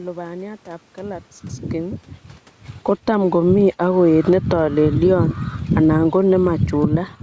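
Automatic gain falling at 2.73 to 3.33 s (about 10 dB) and 4.11 to 6.99 s (about 7 dB). The gain control turns itself down, so speech and background sink together, showing as a tapering waveform envelope and a dimming spectrogram.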